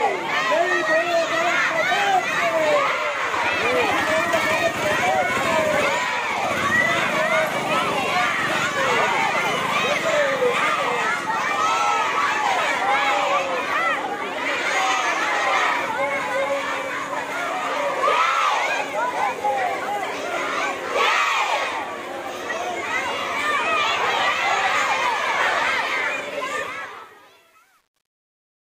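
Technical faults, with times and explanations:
26.58 to 28.66 s, truncation distortion on a fade: undithered steps, fitting 9-bit resolution, make the fade-out gritty from 26.94 s; the waveform shows square stairsteps, the spectrogram broadband speckle.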